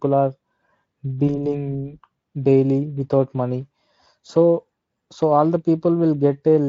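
At 1.27 s, VoIP packet loss concealed by the speech codec: a gap the size of a single 20 ms frame is extrapolated, so the sound smears into a fading buzz or coloured noise and stays weakened until 1.57 s.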